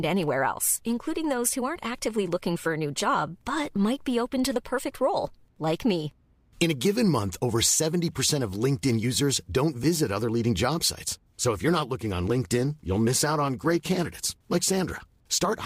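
From 11.01 s, right after "visit other leading job", to the end of the speech, periodic clock jitter adds a rough, metallic edge. The converter's clock is wobbling at roughly 100 Hz, which puts sidebands that far either side of every component, strongest on the high frequencies. Unlike steady hum, it disappears in pauses.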